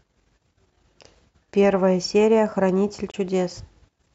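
At 3.11 to 3.16 s the speech cuts to sudden silence and resumes further on, likely a Bluetooth dropout from one late packet; the spectrogram shows a blank vertical gap.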